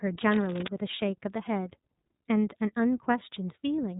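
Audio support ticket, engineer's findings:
iLBC codec, throughout the speech. Band-limited, nothing above 3.8 kHz. Plainly audible rough, slightly synthetic texture. Component: narrowband VoIP codec path. Each frame's excitation coded independently; framing fits 30 ms frames at 13.33 kbps. Upper consonant detail lost.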